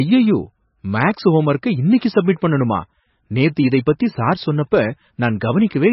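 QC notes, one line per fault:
Throughout, MP3 compression: the speech has nothing above 5.6 kHz, so it's dull and muffled, with a heavy watery, swirly texture as weak bands flicker on and off frame to frame. It's likely a very starved MP3 encode, which fits roughly 18 kbps.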